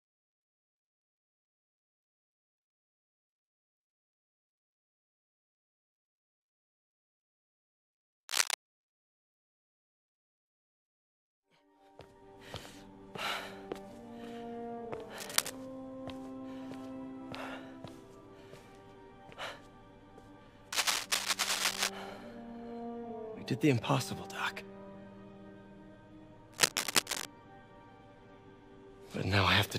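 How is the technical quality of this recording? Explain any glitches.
The recording has four bursts of cable scratch noise, at 8.29–8.54 s, 15.18–15.50 s, 20.72–21.90 s and 26.53–27.25 s. They are rough, crackling rustles roughly 5 to 10 dB above the sound, likely from a worn connector flickering its contact resistance. On a spectrogram each appears as a ragged broadband smear; the waveform shows dense, jagged spikes.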